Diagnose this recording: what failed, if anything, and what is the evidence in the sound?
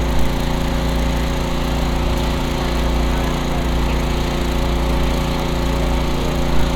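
A block size mismatch (padded) at the driver or buffer stage runs through the whole clip: a steady 46.9 Hz buzz, which fits 1024-sample reads at 48 kHz, each topped up with zeros. Pitch holds and playback slows only to 0.999×, so these are regular padded gaps, not random underrun dropouts.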